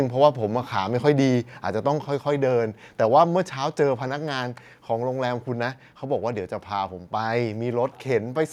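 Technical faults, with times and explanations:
0.24–0.26 s, microphone overload: the input gain was likely set too high, so a peak ran about 1 dB past the converter's ceiling. A small share of samples had their tops flattened, which gives a brief, harsh crackle on that loud moment of speech.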